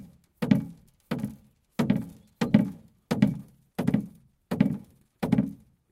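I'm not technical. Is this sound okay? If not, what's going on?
No. From 3.35 s to the end, the sound turns rough and muffled. That's a call bitrate drop: the connection squeezed the audio into far less data.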